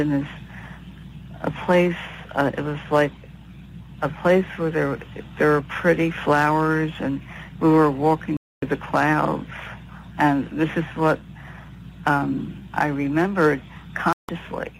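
At 8.37 s the sound cuts to silence until 8.63 s. At 14.13 s it drops again, returning at 14.29 s. Both are digital broadcast dropouts. The receiver stopped getting good frames and muted. The 0.26 s gap fits about eight lost frames. Whatever was sent during each gap is gone.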